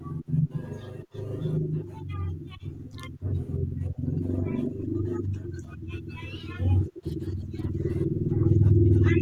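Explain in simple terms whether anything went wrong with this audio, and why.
Something did go wrong, right near the end: at about 8.71 s there's a single sharp click in the speech. That's a case of dropped samples. A handful of samples, a tiny fraction of a millisecond's worth, likely went missing from the stream, so the waveform jumps straight from one value to a later one. The gap is far too short to swallow any actual sound. You just hear that abrupt jump as one quick tick.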